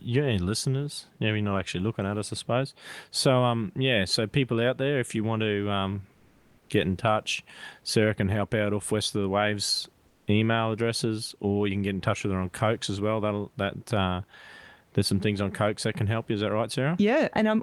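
Right after "you want to um", from 6.17 to 6.69 s, and again from 10.07 to 10.27 s before "email addresses or you", there's comfort noise in place of the background: flat, featureless hiss about 2 dB louder, then about 2 dB quieter. The likely cause is Opus DTX synthesising filler during pauses.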